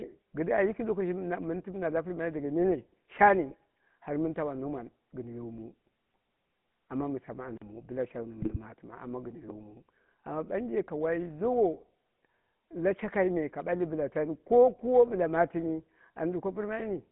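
The clip is speech carried over a GSM full-rate codec for its whole length. The band is held to roughly 150 Hz to 3.4 kHz, with a plainly audible buzzy, gravelly roughness. That roughness separates it from simple band-limiting. A filtered line only sounds muffled, while this one rasps because the excitation is rebuilt from sparse, regularly spaced pulses. GSM bit errors break the sound into squawks and gargling at 3.50 to 3.54 s and again, more severely, at 8.42 to 8.57 s. Their lengths fit about two and seven corrupted 20 ms frames. Unlike a dropout, the sound warps rather than going quiet, because damaged filter, pitch and gain values reach the decoder. At 7.57 to 7.62 s a block of digital silence leaves a 43 ms hole, which fits a 2048-sample buffer that was not filled in time. It cuts out and back with no fade, with silence in between. That sets it apart from the codec faults, which never fall fully silent.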